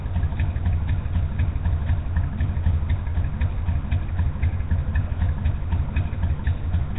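From start to finish the audio carries heavy codec damage, most likely Nellymoser compression of the kind Flash used for microphone input. Nothing survives above about 3.8 kHz, so the top end is missing entirely. Quieter bands appear to have been dropped and replaced with noise, leaving a gritty hiss wrapped around every sound and a smeared, submerged blur to transients. The degree of loss fits a rate around 16 kbps.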